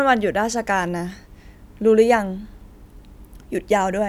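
A short bit of speech, and there's nothing technically wrong to flag anywhere in it.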